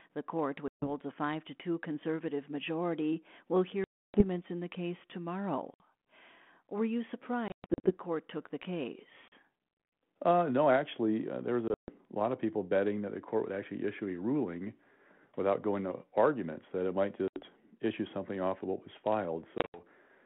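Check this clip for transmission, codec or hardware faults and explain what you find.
The clip has one recurring fault: packet loss on an ADPCM call. It strikes eight times, at 0.68, 3.84, 5.74, 7.48, 9.28, 11.68, 17.28 and 19.58 s. The longest gap, 300 ms, falls between "conservative majority will" and "in the case". Others sit after "actually uh there was" and before "issue something off of". The hole lengths fit 20 ms packets. Each loss leaves a hard-edged silence. The ADPCM decoder's predictor and step size then no longer match the sender's. So the sound resumes slightly distorted before settling. The losses at 7.48, 11.68 and 19.58 s are broken into several short holes. The 32 kbit/s G.726 link itself carries the narrow telephone band.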